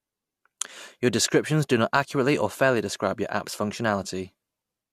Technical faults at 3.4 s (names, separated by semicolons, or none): none